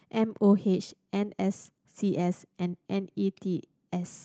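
No technical faults occur at any point in the speech, so there is nothing to describe in time order.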